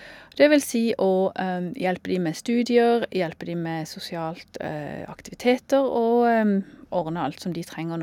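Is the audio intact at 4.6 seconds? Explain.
Yes, at 4.6 seconds the speech plays through cleanly, with no audible fault at that moment.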